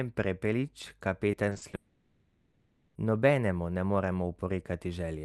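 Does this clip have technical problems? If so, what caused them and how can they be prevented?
Yes. From 1.31 to 1.75 s there is repeated packet loss with a robotic sound. Five short holes, the longest 40 ms and together about 120 ms, or roughly a quarter of that stretch, were each patched by extending the preceding sound, so the speech turns choppy and robotic. On a spectrogram this appears as brief smeared, flattened bands repeating in quick succession, and the waveform shows short uniform segments breaking the natural envelope. A larger jitter buffer and forward error correction on a less congested link would prevent this.

From 1.75 to 2.97 s, a 1.2 s stretch is filled entirely by stretched, synthetic continuation, with no true silence, and the original audio never resumes within that span. This is likely a long network dropout, where the receiver kept generating sound to cover the missing stream. 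On a spectrogram the region shows smooth, repetitive, detail-free bands, capped near the 12 kHz ceiling of the Opus path. The waveform shows a fading envelope. A more stable connection with redundancy or automatic reconnection would prevent this.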